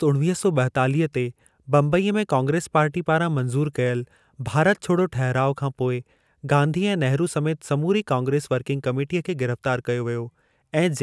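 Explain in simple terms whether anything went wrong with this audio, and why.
Nothing went wrong here.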